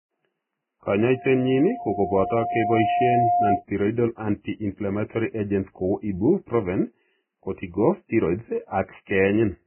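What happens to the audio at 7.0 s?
At 7.0 s, as across the whole clip, the speech is band-limited with nothing above 3 kHz, and the treble that remains is grainy and hissy. That points to heavy damage from likely Vorbis compression at a very low bitrate, around 9 kbps. A plain low-pass filter would leave the remaining band clean; here the coarsely quantised residue has turned fine detail into noise.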